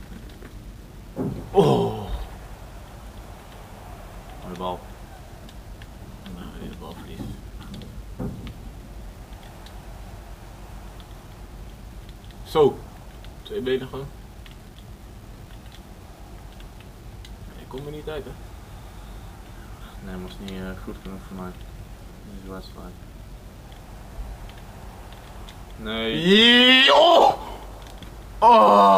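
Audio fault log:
throughout: low bit depth without dither. A gritty, grainy distortion rides on the sound and changes with it, thickest in quiet passages, where the faintest parts sputter or drop out. This is likely rounding to about 8 bits, leaving error only about 35 dB down.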